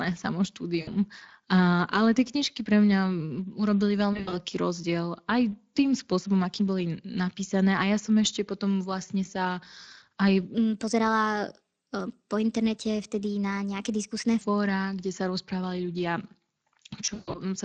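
Throughout the clip the speech sounds hoarse and grainy, with a noisy, smeared top end. This is Speex codec damage, plainly audible here. A mid-range setting, which fits a bitrate near 20 kbps, leaves too few bits to reproduce the voice's excitation cleanly.

At 0.81 to 0.89 s there is a short buzzy smear, about 60 ms long. The same thing happens at 4.13 to 4.39 s, between "knižky pre mňa urobili" and "rozdiel aj tým spôsobom": 140 ms of dropouts scattered over 200 ms, with the longest run 60 ms. This is VoIP packet loss concealed by the speech codec. The decoder stretched its last pitch and filter into a fading tone, and the voice stays weak for a moment afterwards.

From 10.54 to 14.41 s, just after "potom vlastne sa aj", the speech turns hurried and about three semitones higher. Speed and pitch rise together, by a factor of 1.18. This is a section at the wrong speed, likely played against a mismatched clock.

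At 17.05 to 17.39 s the packet-loss concealment returns and is heavier. About 200 ms is lost across 280 ms, with one 140 ms run. The sound decays into a droning, distorted fade before the speech recovers.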